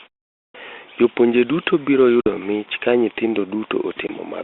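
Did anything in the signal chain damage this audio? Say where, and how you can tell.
Yes. The playback stage let the output device sleep through the opening silence, and it needed time to wake and lock again. The sound begins after a 0.32 s pause, but roughly the first 225 ms, from 0.32 to 0.55 s, never comes out. The audio starts abruptly out of silence, without its first sounds. That is a clipped start after a pause: the device cuts in late rather than the source starting late.

The network dropped packets on a call carried by G.726 ADPCM at 32 kbit/s, within a line band of 250 Hz to 3.6 kHz. A 50 ms hole, a handful of packets, opens at 2.21 s between "duto biro" and "mich ka nyithindo". A shorter 20 ms gap of a couple of packets follows at 4.07 s. Each loss is filled with hard-edged silence, so the decoder's adaptive predictor and step size drift from the sender's. The audio returns slightly distorted until the two resynchronise. 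That is packet loss on an ADPCM call.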